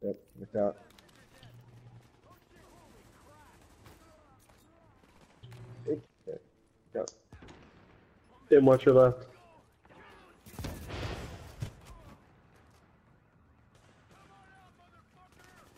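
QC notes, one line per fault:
6.02–6.10 s, damaged data in a compressed stream: corrupt frames break decoder sync, giving an 80 ms glitch, visible as a broadband smear with a waveform discontinuity.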